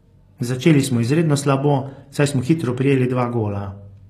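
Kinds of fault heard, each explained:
HE-AAC compression: likely an HE-AAC encode near 24 kbps, rebuilding treble from copied lower bands; sibilants sound gritty and metallic, and nothing reaches above 14.9 kHz.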